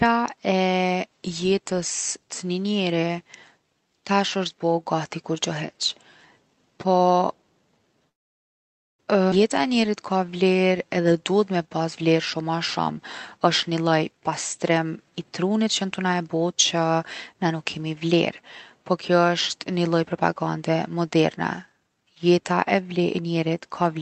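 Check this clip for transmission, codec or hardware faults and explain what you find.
Four network-related faults fall between 8 and 18 seconds in this speech clip, all heard through a call codec whose band stops near 8 kHz.

A call audio freeze runs from 8.09 to 9.01 s. The speech halts and almost the whole 0.9 s is silence, then resumes exactly where it stopped with nothing lost. This is likely packets stalling in transit until the jitter buffer emptied.

A skip ahead occurs at 9.31 s. Playback jumps forward with essentially no gap, and roughly 0.7 s of speech is missing. The receiver discarded a stretch of audio while later packets were already queued, splicing the two sides almost directly together.

A jitter buffer slow-down spans 9.62 to 12.95 s. Speech runs at 90% speed while keeping its pitch, with sounds stretched out. The receiver repeated short pitch periods many times to rebuild its reserve, adding 347 ms in total.

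A jitter buffer speed-up follows from 13.37 to 17.80 s. Speech plays at 114% speed at unchanged pitch and sounds hurried. The buffer was holding more audio than its target, so the receiver trimmed many short pitch-period pieces, removing about 0.7 s overall.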